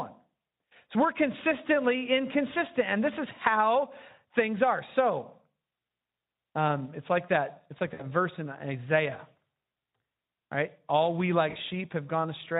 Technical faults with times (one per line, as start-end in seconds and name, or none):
7.93-8.01 VoIP packet loss concealed by the speech codec
11.49-11.57 VoIP packet loss concealed by the speech codec